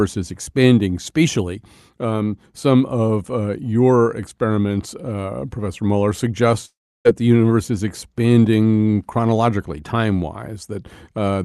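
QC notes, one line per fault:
6.65 to 7.07 s, long network dropout: the sound smears into a fading buzz, then drops to near silence before resuming at "the universe is expanding" with about 0.4 s lost. This is likely a gap in packet arrival, with the receiver filling in with decaying concealment until audio returned.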